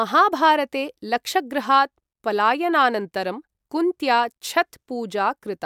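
No technical faults can be heard in this recording.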